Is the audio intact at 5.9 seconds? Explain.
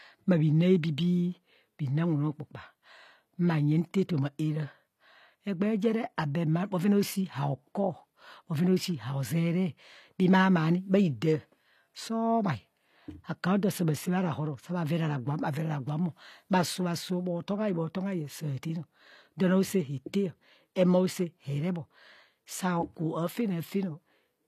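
No. At 5.9 seconds, as throughout the speech, the sound carries HE-AAC compression artefacts, likely from coding at a rate near 24 kbps. The treble is rebuilt from copied lower bands, so sibilants sound gritty and metallic. A spectrogram shows blocky, repeated upper bands ending sharply at 14.9 kHz.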